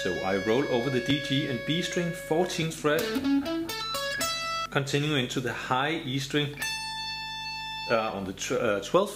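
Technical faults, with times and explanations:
1.10, 2.62 and 4.15 s, dropped buffer (overrun): the sound jumps ahead, likely samples overwritten before they were read, losing roughly 10 ms twice, then about 40 ms.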